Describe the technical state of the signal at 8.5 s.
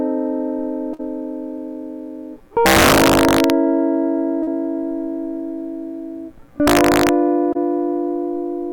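At 8.5 s the music plays through intact, with no dropout, distortion or other fault audible at that moment.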